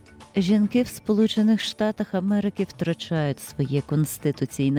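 The audio has repeated stalls (stutter) between 1.34 and 2.37 s: nine short gaps, none longer than 19 ms, totalling 87 ms, where late packets emptied the jitter buffer and the receiver extended the preceding sound rather than dropping anything. A jitter buffer slow-down follows from 2.75 to 3.39 s, where repeated pitch periods stretch the passage by 39 ms, to 95% speed at unchanged pitch, as the buffer rebuilt its reserve.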